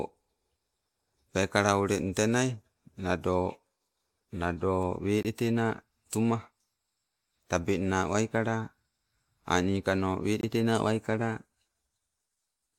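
Speech with two blocks of digital silence, at 5.23–5.25 s and 10.41–10.43 s. Each is a 21 ms silent gap, which fits a 1024-sample buffer underrun. On a waveform it shows as a flat line, and on a spectrogram as a blank vertical strip.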